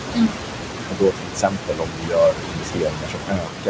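A short speech recording carries noise suppressor artifacts throughout. The suppressor pulls the steady room noise down by about 21 dB, and that noise sits only about 5 dB under the voice. Speech is also cut by the noise suppressor from 0.11 to 0.38 s and again from 0.89 s to the end. The suppressor mistakes parts of the voice for noise and drops them by up to about 22 dB, so they sound swallowed and faint. The band stops at 8 kHz, which fits a 16 kHz wideband call codec such as G.722.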